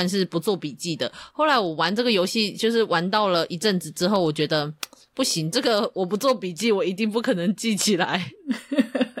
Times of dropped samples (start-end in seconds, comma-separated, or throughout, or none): 4.16